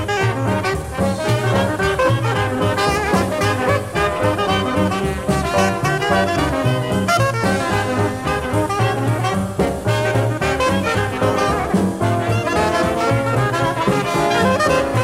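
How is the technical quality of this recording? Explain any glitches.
The recording has no technical glitches to explain. No audible faults turn up anywhere in it.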